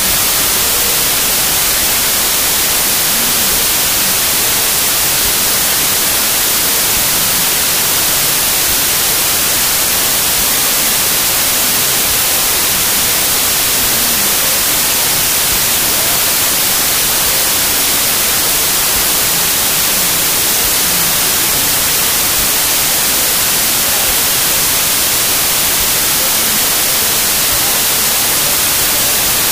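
From the very start and right through, you get a wrong sample width problem: the sound fits packed 24-bit samples being read back as 16-bit. Mismatched bytes turn most values into loud noise, with the real audio buried underneath, running at about two-thirds speed and pitched down to match.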